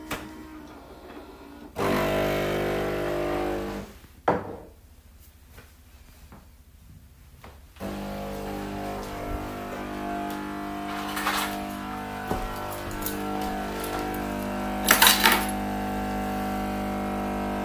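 No technical faults can be heard anywhere in this recording of sounds, and the signal stays steady and intact throughout.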